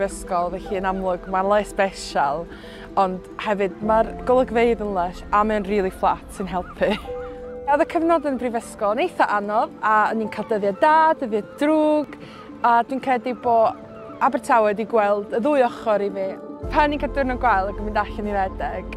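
Small jumps in the audio at 2.53 s and 12.04 s are likely a dropped buffer (overrun), each skipping roughly 10 ms. Unlike a dropout, no silence fills the gap: the two sides join directly, so the sound lurches forward.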